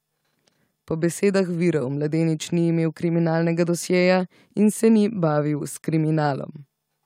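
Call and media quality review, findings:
No faults found in clip.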